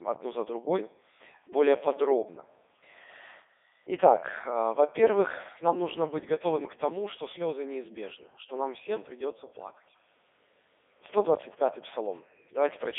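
From start to finish the speech runs through a Codec 2 vocoder, with heavy codec damage, and the sound fits its 3.2 kbit/s mode. The codec doesn't keep the waveform at all. It sends only pitch, voicing, energy and a rough spectral envelope, then rebuilds the voice from sine waves, so it comes out robotic and buzzy. The band is squeezed to about 300 Hz to 3.6 kHz, with nothing above 3.8 kHz.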